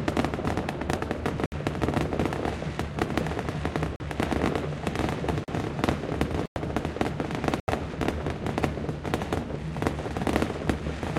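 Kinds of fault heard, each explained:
Block of digital silence: at 1.46, 3.96, 5.44, 6.46 and 7.6 s the sound cuts out abruptly for 61, 40, 40, 102 and 80 ms. Zeros replace the audio there, because either an output buffer went unfilled in time or a calculation produced invalid numbers.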